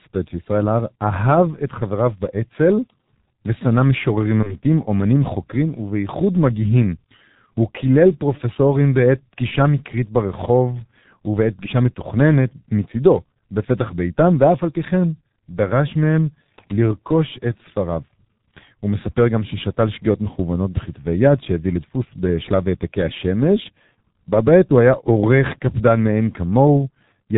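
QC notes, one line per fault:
throughout: G.723.1 codec, speech is muffled and hoarse with smeared consonants, nothing above 4 kHz, which fits a heavily squeezed stream around 6 kbit/s.
4.43 to 4.55 s: VoIP packet loss concealed by the speech codec, a brief fade where the decoder guessed across what sounds like one lost 30 ms frame, then recovered slowly.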